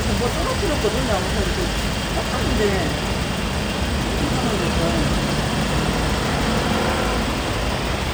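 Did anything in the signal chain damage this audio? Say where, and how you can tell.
No, nothing along the way seems to have harmed these everyday sounds, since there's nothing I can hear that points to trouble at any stage.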